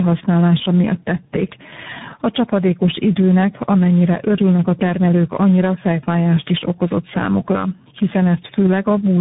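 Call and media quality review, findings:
Gain pumping, throughout. Gain swings by around 10 dB, leaving levels squashed. Likely cause: input gain far too high, with a fast limiter clamping every peak.

Tandem speech coding, throughout. Speech is rough, muffled and warbly, with nothing above 3.8 kHz. The damage exceeds any single codec's signature and fits three speech coders in sequence (GSM full rate, iLBC, CVSD), each re-coding the previous one's degraded output.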